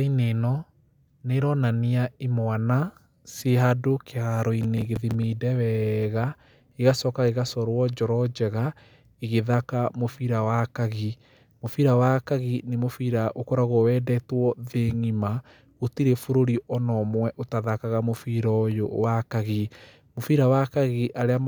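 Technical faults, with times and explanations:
4.63–5.24 s, processor overload crackle: a gritty burst of tearing rides on the speech for about 0.6 s, just before "wega gĩgacoka gĩgacorwo". The processor kept missing its deadlines for small buffers, roughly 10 ms each, several in a row, and each miss replayed a scrap of old audio with hard edges.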